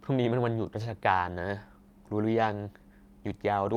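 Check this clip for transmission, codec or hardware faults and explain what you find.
No faults are audible here.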